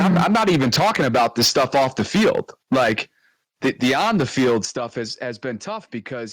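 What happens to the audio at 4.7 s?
Microphone volume stepped down at 4.65 s, just before "stuff has": the speech and background drop abruptly by about 10 dB, likely because the call software cut the microphone's input level in one step.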